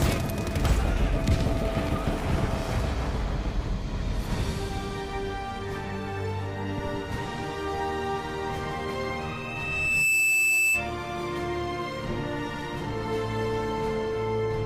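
At 9.22 s a loudspeaker feedback squeal begins and runs until 10.94 s. A single tone at 2.6 kHz swells over roughly one second and ends up about 5 dB above the rest of the sound. The microphone was picking up the loudspeaker it fed, and at 2.6 kHz the loop gain exceeded one, so that frequency grew on its own.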